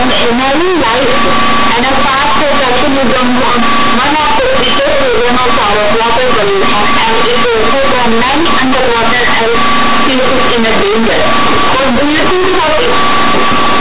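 Speech clip carrying companded audio read as linear from start to finish: the mu-law bytes are played as plain 8-bit samples without expansion, so every sign change jumps across half the range. The waveform looks like a dense block with quiet and loud passages equally tall, pauses filled with heavy noise. The spectrogram shows broadband buzz up to the 4 kHz ceiling of the telephone coding.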